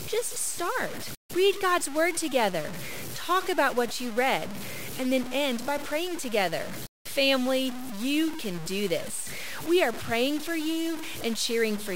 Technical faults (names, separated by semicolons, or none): low bit depth without dither